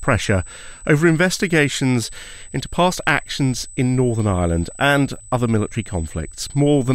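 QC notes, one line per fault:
Throughout, USB whine: current drawn by the USB bus in 125-microsecond microframes is leaking into the audio through the power or ground path, putting a steady fixed-pitch tone at 8 kHz under the speech, about 20 dB below it.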